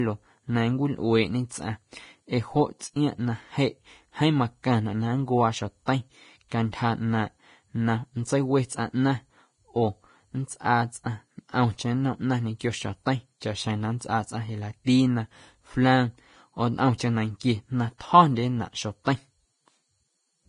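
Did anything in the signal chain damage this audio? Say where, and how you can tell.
Yes, at the codec stage, throughout the speech. Nothing is present above 10.6 kHz, and the remaining treble sounds hissy and grainy, with roughened tones. This is likely Vorbis compression at a low setting, with damage heavy enough to fit a bitrate near 29 kbps. The coder has lowered its cut-off and quantised the upper residue so coarsely that fine detail turns into noise of similar energy. A steep, fixed band limit combined with grainy treble marks a codec, not an analogue filter.

At 16.98 s there is pre-echo: a short hiss, about 17 ms long, runs into a sharp attack, which sounds smeared. The attack falls late in a transform block, so the coarse quantisation noise sized for the loud onset spreads back over the quiet moment just before it. Because the hiss comes before the transient rather than after it, this is pre-echo and not a reverb tail or a click.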